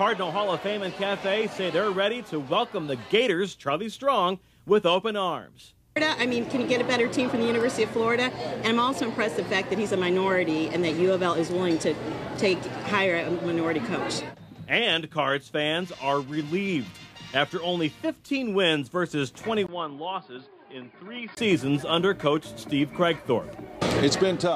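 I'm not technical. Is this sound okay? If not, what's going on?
No. From 19.67 s to 21.37 s the sound abruptly turns duller and boxier, with a brief gap of about 20 ms where it changes over. It also drops noticeably in volume and picks up a faint new background noise. This is most likely an input switched to a poorer device: the recording jumped to a lesser microphone or headset that cuts off everything above 5 kHz, then returned to the original source after 21.37 s.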